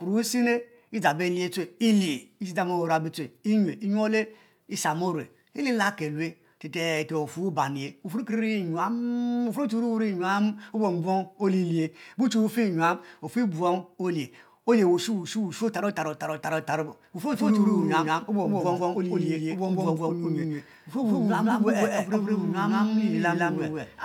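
From 17.34 s to the end the speech carries a doubled audio track: an equally loud full-band copy trails by around 150 ms, likely from a second, slower capture path. Unlike an echo, it never decays, adds no room colour and starts abruptly.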